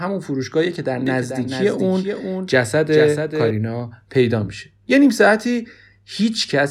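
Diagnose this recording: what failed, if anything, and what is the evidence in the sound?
A doubled audio track runs from 1.07 to 3.51 s: the speech is joined by a full-band copy of itself trailing by around 0.4 s and roughly 5 dB quieter, with no decay or room colour. It cuts in and out abruptly at those times. A spectrogram shows each syllable's pattern repeated a fixed distance to the right, and the waveform shows overlapping shifted envelopes. The likely cause is a second, slower capture path or an edit holding two out-of-step copies.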